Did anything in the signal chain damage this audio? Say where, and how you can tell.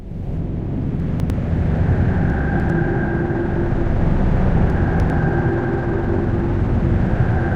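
Yes. Three brief jumbled moments, at 1.0 to 1.3 s, 2.3 to 2.7 s and 4.7 to 5.1 s, sound garbled, though nothing seems missing. This is chunks out of order at the buffer stage: a 100 ms block was delivered late and played two or three blocks after its proper place, so the sequence is reshuffled with three hard joins each time. This fits a 100 ms chunk buffer.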